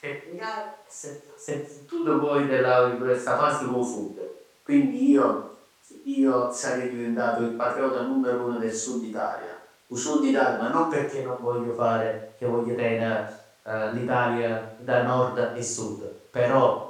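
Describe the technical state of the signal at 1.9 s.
At 1.9 s the speech signal is intact, with no dropout, clipping, distortion or other fault to be heard.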